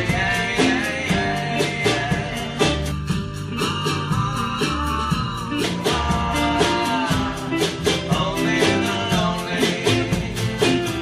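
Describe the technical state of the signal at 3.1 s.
At 3.1 s the sound is inside a stretch of channel delay (comb filtering) running from 2.92 to 5.64 s. One channel lags by a little under a millisecond before the mono sum, so cancellations start near 700 Hz and repeat evenly upward. The result is hollow and phasey, with fixed notches, unlike a flanger's sweep or an audible doubling.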